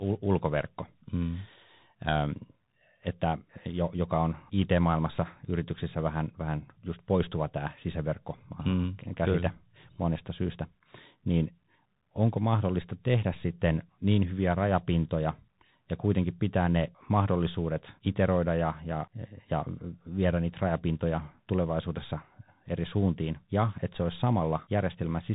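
Speech carries the Bluetooth CVSD headset codec throughout. Nothing passes above 3.8 kHz, and unlike plain telephone band-limiting, a granular hiss and scratchy s sounds reveal one-bit delta coding, which fits 64 kbps.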